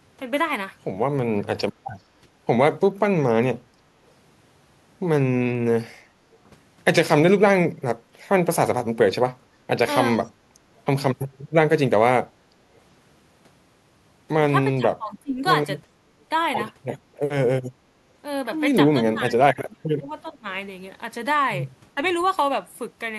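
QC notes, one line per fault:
6.32–6.37 s and 10.24–10.29 s, echo leak: a faint delayed copy of the speech, about 40 dB below it and trailing by 375 ms, surfaces in brief scraps. This is likely a far-end loudspeaker echo that its echo canceller failed to fully remove and sent back.
10.12–10.29 s, speech suppressed in double talk: the speech dips by up to about 15 dB across roughly 150 ms while the echo scrap at 10.24 s overlaps it. Likely the echo canceller, unable to separate talker from echo, attenuated both.
14.75–15.42 s, speech suppressed in double talk: the speech drops by up to about 25 dB over roughly half a second, sounding pulled down. Likely both sides talking at once, with the echo canceller turning down the near talker along with the echo.
15.93–15.98 s, speech suppressed in double talk: a brief dip of about 50 ms, down by around 15 dB. This is likely the same echo-canceller behaviour during overlapping talk, this time catching only a short slice of the speech.
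18.97–20.47 s, speech suppressed in double talk: the longest episode, with the speech pushed down by up to about 25 dB for roughly a second in total, in pieces across this span. Likely overlapping talk that the echo canceller mistook for echo and suppressed.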